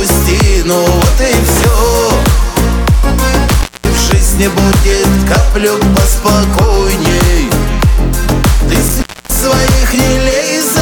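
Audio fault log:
3.49–3.99 s and 8.88–9.44 s, intermittent contact: a loose plug or cable briefly loses contact twice, and the sound drops out for about 0.22 s and then 0.27 s, with faint hiss during each open stretch. As the contact breaks and reconnects it makes crackle at both edges. On a waveform the signal collapses to a near-flat line between clusters of sharp spikes. On a spectrogram each gap shows as a dark, near-empty band bounded by thin broadband vertical streaks.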